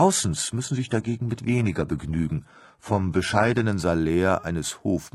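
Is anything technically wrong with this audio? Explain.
Yes. From 0 to 3.65 s it's an adaptive stream starting at a low bitrate: dull, smeared speech with nothing above 11.8 kHz, like a 16 kbit/s HE-AAC start, then it jumps cleaner without a gap.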